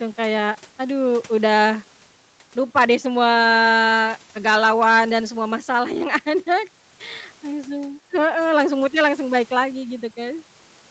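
Throughout the speech, there is clock drift between sender and receiver: the sending device's audio clock runs slow, by around 2 percent. The receiver's jitter buffer keeps draining instead of holding a steady level. To stop it running dry, the receiver has to stretch the stream. That shows up as a faintly dragging, uneven pacing rather than one obvious glitch, and the top end stops near 8 kHz, as it does on an Opus call path.

From 0.12 s to 10.83 s there are repeated timing corrections. The receiver keeps repeating short slices of audio so that playback runs at 98 percent speed, and the repeats add up to roughly a third of a second over the stretch. Every correction goes the same way, lengthening the audio, but they land at irregular points. Each one is small and heard, if at all, as a slight hiccup or a wobble in the tempo.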